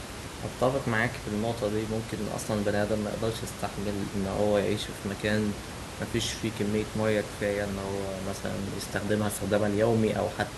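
Nothing here goes wrong technically; the speech sits above room noise, about 10 dB down, that simply belongs to the space where it was recorded.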